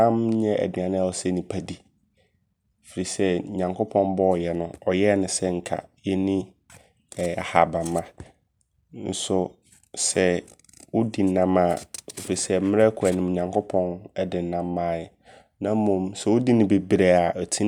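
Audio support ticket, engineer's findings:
Nothing to flag on this speech clip: listened through and found no audible faults, so no component or mechanism to point at.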